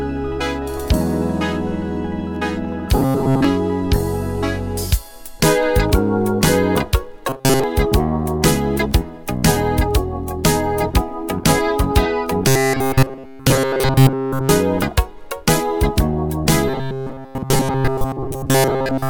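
Robotic sound from repeated short buffers appears at 2.97–3.45 s, 7.29–7.64 s, 12.48–14.49 s and 16.68 s to the end. A fixed 133 Hz buzz turns the sound metallic. Most of it repeats, and all of it does in the third stretch. Playback likely looped roughly 7.5 ms buffers while fresh audio lagged.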